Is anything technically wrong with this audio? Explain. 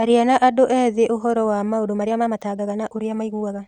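Yes. From 1.72 s to the end, the speech suddenly runs about 1.52 times faster yet keeps its pitch. It sounds rushed, likely a time-stretched section where short pieces were dropped, unlike a plain speed-up, which would raise the pitch.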